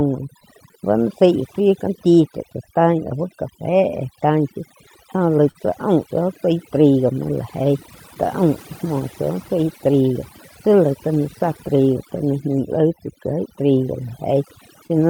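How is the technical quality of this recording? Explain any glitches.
The recording has several clear technical faults. The speech sounds processed and unsteady, with small timing glitches throughout.

Overdone noise removal affects the whole clip. The background drops and breaks up into twinkling specks. Noise reduction was set too aggressively for the noise present. It pulled individual frequency bands far down wherever they came close to its noise estimate, and quieter parts of the speech that fell in those bands were stripped out along with the noise.

Clock drift between sender and receiver also runs through the whole clip. The pacing never quite settles, and small hiccups recur at uneven intervals. The sending side's clock appears to run roughly 3% slower than the receiver's. That mismatch drains the receiver's jitter buffer, so it has to keep adjusting playback to stay in step. The glitches come from those ongoing adjustments rather than from one single event.

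Repeated timing corrections are that adjustment in action, from about 0.36 to 14.35 s. The tempo feels slightly unsteady, playing at about 98% speed, with slight hiccups scattered through the stretch. To cover for the slow sender, the receiver kept repeating short pieces of audio, always in the same direction but at irregular spacing. Together these repeats add roughly 0.3 s to the clip. Each one is small, so it registers as a stumble rather than a skip.

Scattered short gaps appear between about 4.89 and 8.85 s. There are brief ticks and smears, around five of them, the longest roughly 40 ms. Individual packets arrived late or went missing here and there. Each time, the receiver covered the hole by extending the sound that came just before it, for roughly 70 ms of patched audio in total. No speech is actually lost, but the joins are audible as tiny blemishes.

A short stall from a late packet occurs at 14.87 to 14.91 s. 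A sound is held a moment too long, with a slight buzz or dip. One packet was not ready when it was due, so the jitter buffer ran dry. The receiver stretched the last sound by 25 ms until the packet arrived, then resumed from the same point. Nothing is missing, and the delay grows by 25 ms.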